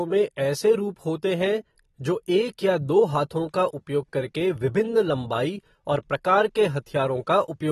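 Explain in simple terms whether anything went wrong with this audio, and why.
Yes. The recording was most likely squeezed too hard by AAC compression, the kind used for streaming and phone apps, which saves space by throwing away detail it judges you won't miss. Here that shows all the way through the speech. Nothing above about 12.4 kHz survives, so the sound is dull and lacks crispness, and the remaining detail is smeared, giving hissy sounds and held tones a plainly audible warbling, fizzy edge.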